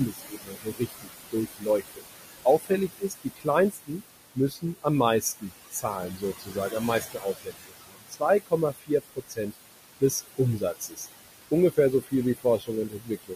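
Noise suppressor artifacts run throughout: the suppressor pulls the steady room noise, which sits about 10 dB below the speech, down by about 18 dB, so the background pumps, sinking between words and rising under them. Speech cut by the noise suppressor appears at 0.06–2.08 s, 2.44–4.02 s, 4.35–4.86 s, 5.21–9.55 s, 10.0–11.06 s and 11.51 s to the end. Within each span the suppressor mistakes quiet parts of the speech for noise and drops them by about 17 to 21 dB, roughly a second and a half in the longest spans, so soft consonants and word endings sound swallowed.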